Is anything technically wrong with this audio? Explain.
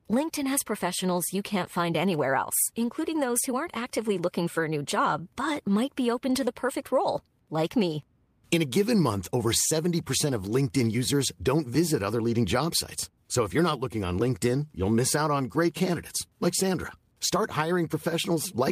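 No, nothing is technically wrong with this audio.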